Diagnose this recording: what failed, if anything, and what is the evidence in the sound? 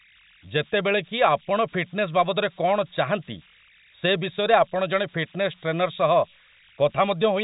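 The converter failed. Converter idle tones run through the whole speech clip. A tone around 2 kHz sits in pauses, with grainy noise about 28 dB below the signal under quiet passages. An undithered delta-sigma modulator is locking into repeating bit patterns at low input.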